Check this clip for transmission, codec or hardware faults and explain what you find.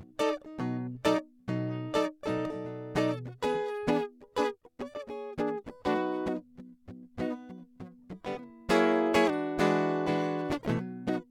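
Nothing in the music points to a transmission, codec or hardware problem; the signal sounds continuous and intact throughout.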